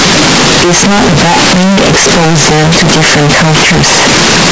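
A speech recording with a float read as integer fault running the whole way through. The waveform is a dense, nearly square block sitting at an almost fixed, high level from start to finish, and the spectrogram is smeared bright across the full band with no quiet gaps, so background noise is as loud as the talking. The result is very loud and harsh, yet pitch movement can still be followed. The likely cause is 32-bit float samples read as 32-bit integers, letting sign and exponent bits dictate level.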